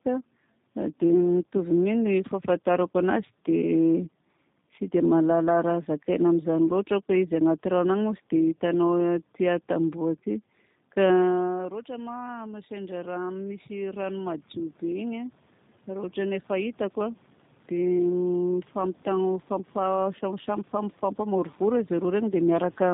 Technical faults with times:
0.00-22.93 tandem speech coding
10.02-22.45 automatic gain rising

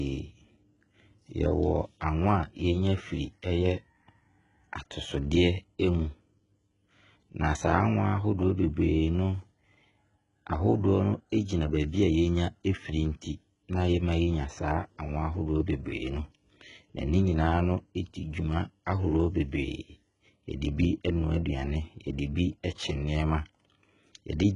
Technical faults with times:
0.00-24.56 HE-AAC compression

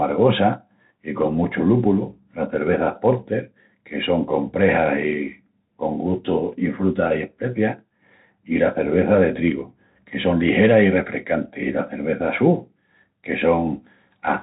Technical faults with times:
0.00-14.43 Bluetooth CVSD headset codec

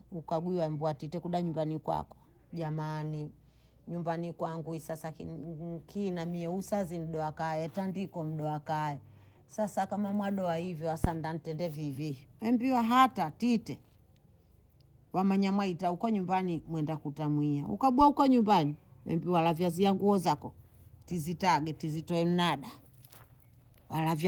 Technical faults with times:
11.04-11.13 phantom power thump

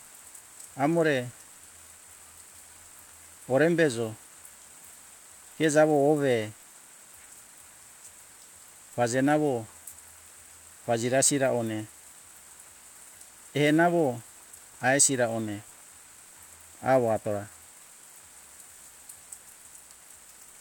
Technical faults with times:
19.33-20.60 block size mismatch (padded)

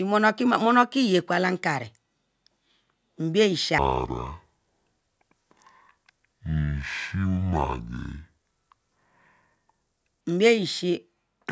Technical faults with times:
3.78-10.21 wrong sample rate

